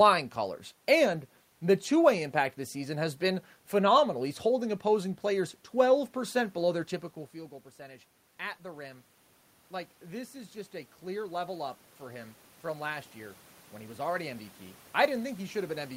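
From 6.14 s, after "holding opposing players", the input falls by about 18 dB and automatic gain rising runs to the end. Voice and room noise swell together as gain climbs, unlike the talker's move near 7 s, which shifts only the voice.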